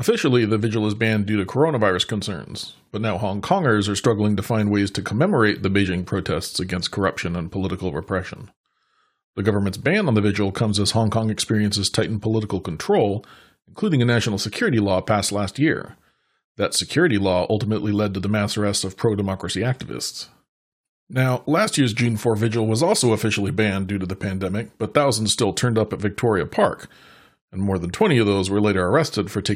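Listening through the speech recording, nothing stood out as a technical problem at any point.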